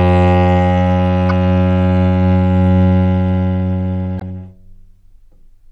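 A recording of sounds, likely squeezed through MP3 compression at a low bitrate, which fits about 64 kbps: the texture turns swirly and watery throughout. Damaged data in the compressed stream makes the decoder lose its place briefly, giving short chirps or blips from 1.29 to 1.31 s and from 4.17 to 4.22 s.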